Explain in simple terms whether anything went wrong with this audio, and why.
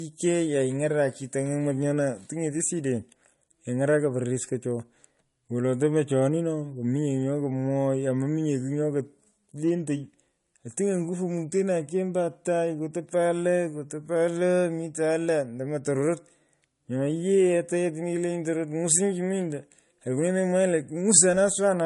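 Throughout the speech, nothing is heard above about 11.1 kHz, and two different kinds of compression smearing overlap. That layering, not a single codec's artefacts, points to likely transcoding between lossy codecs: an MP3 copy later re-encoded as AAC-LC.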